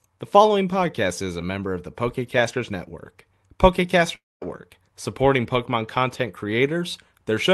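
From 4.15 to 4.43 s, a long network dropout likely halted packets. The speech smears into a fading buzz, goes silent, and resumes with about 0.26 s lost.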